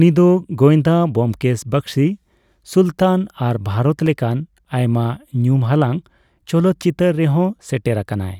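A block of digital silence at 4.06 s: about 2.9 ms of the speech drops abruptly out, likely an unfilled output buffer (fitting a 128-sample block), heard as a single tick.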